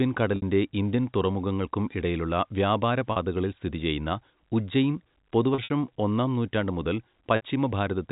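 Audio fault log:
0.36–0.42 s, 3.12–3.16 s, 5.54–5.70 s, 7.36–7.41 s: packet loss with pitch repetition. Lost packets (40 to 100 ms) are patched by repeating the last pitch period, giving a held, buzzy sound that fades out over about 50 ms, into silence for the longer gaps.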